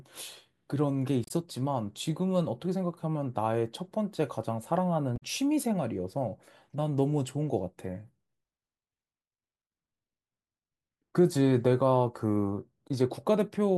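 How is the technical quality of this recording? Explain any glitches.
Two short glitches interrupt the speech, both from damaged data in a compressed stream. The first runs from 1.24 to 1.31 s and the second from 5.16 to 5.23 s, each lasting about 70 ms. In both places some of the encoded bytes were corrupted, so the decoder misread those frames and lost sync until it found the next valid frame header. What reaches the ear is a brief, unnatural blip cutting across the speech.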